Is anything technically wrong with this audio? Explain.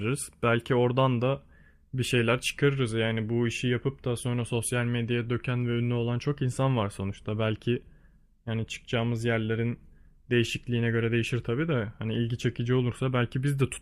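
No, nothing technically wrong can be heard in this speech recording. There is no fault here to explain.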